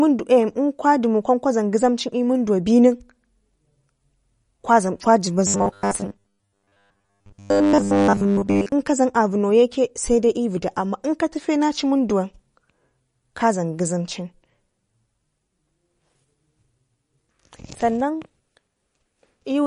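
Across the whole clip the speech carries plainly audible damage that is likely from MP3 compression. Nothing is present above about 10.6 kHz, where the encoder has cut the treble, and the remaining band has a watery, swirling quality with smeared consonant attacks. Weak frequency components drop in and out from frame to frame. The depth of the damage points to a low bitrate, in the region of 40 kbps.

From 5.47 to 8.72 s the speech turns into a rigid, metallic buzz, a robotic sound from repeated short buffers. New audio was likely arriving too seldom, so the playback filled the gaps by looping a roughly 10 ms stretch while most of the real audio in that span was skipped. That looping imposes a fixed 100 Hz pitch over the speech, which still loosely tracks its rhythm.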